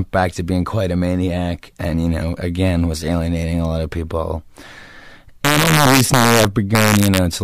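From 5.45 s to 7.18 s, the speech suffers integer overflow. The signal is pushed about 2 dB past the largest value the integer format can hold. Instead of being limited at full scale, those peaks wrap around to the opposite sign. Each loud moment jumps across the whole range in a single sample. The result is a series of violent cracks on the strongest parts of the speech. They are far harsher than ordinary clipping.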